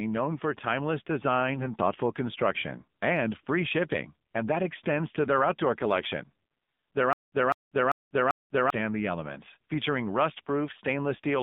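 Speech clip carried over the AMR narrowband mobile codec at a low rate, about 7.4 kbps. Nothing passes above 3.6 kHz, and the voice sounds buzzy and synthetic. From 1.54 to 1.65 s, AMR bit errors make the sound hoarse and gargly, which fits a handful of damaged frames on a weak link. From 7.13 to 8.70 s there is a stutter with silent gaps. A 200 ms burst repeats four times, with about 193 ms of digital silence between, likely from a stalled stream.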